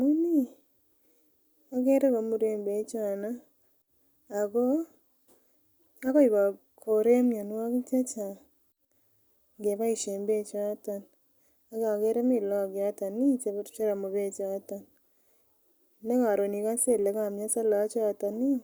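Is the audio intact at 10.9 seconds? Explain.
Yes, the speech at 10.9 seconds plays through cleanly, with no dropout, click, distortion or other fault at that moment.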